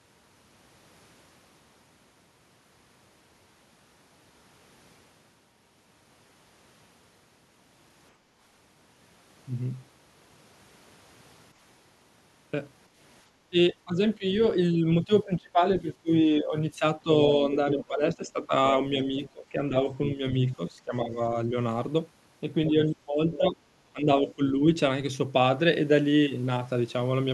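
At 8.16 to 8.37 s the room tone dips by about 7 dB for roughly a fifth of a second: background gated by the echo canceller, which pulled the microphone down while the loudspeaker played. Only the ambience sinks and then recovers, and no talker is being clipped, which separates it from double-talk suppression.

From 13.5 to 17.08 s, 17.76 to 21.55 s and 22.71 to 24.61 s the talker's speech itself dips, thins and breaks up in pieces, adding up to about a second and a half in each of the first two spans and about a second in the third. The deepest loss is about 20 dB in the first and about 15 dB in the others. This is speech suppressed in double talk, likely because the canceller could not tell the talker from the echo while both sides spoke.

Scraps of a second voice surface at 17.54 to 17.84 s, at 19.03 to 19.29 s and at 23.33 to 23.37 s, sitting about 15, 25 and 20 dB under the main speech. 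This is the other side's voice leaking through, likely residue the canceller failed to remove. Unlike the suppression, something is added here rather than taken away.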